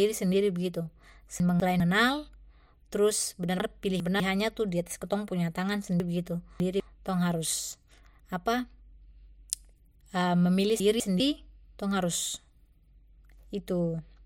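The speech jumbles at 1.4 to 1.8 s, 3.6 to 4.2 s, 6.0 to 6.8 s and 10.8 to 11.2 s: chunks out of order. Each time a 200 ms chunk plays late, by one, two, three and one chunks respectively. Nothing is lost, but the sequence scrambles across three hard joins.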